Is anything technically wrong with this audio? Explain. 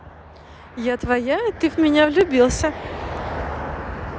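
Yes. At 2.21 s the speech carries a single sharp click that points to dropped samples. The likely cause is a tiny stretch of the stream, roughly half a millisecond, going missing, so the waveform leaps straight from one value to a later one instead of following a smooth path. Far too little is lost to remove any sound, but the abrupt step shows as a vertical jump in the waveform and a thin vertical line across the whole spectrogram.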